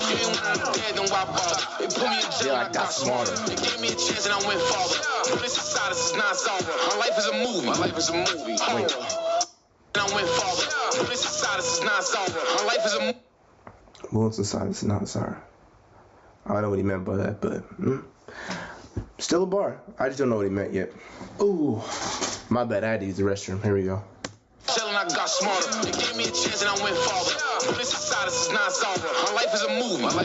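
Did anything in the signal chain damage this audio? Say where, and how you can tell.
Yes, there's gain pumping through the whole clip. The level swings by roughly 25 dB, so loud and quiet passages end up squashed close together. That's likely the input gain set far too high at the microphone, with a fast limiter clamping down on each peak. The top end stopping around 8 kHz is just the call path's bandwidth.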